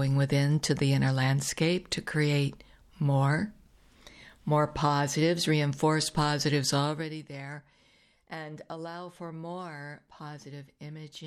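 From 6.79 to 7.24 s, a level drop of about 15 dB is applied in unsmoothed steps, roughly seventy per second, rather than as a continuous ramp. This causes zipper noise: each jump leaves a tiny click, heard as a rapid zipping riding on the sound as it fades.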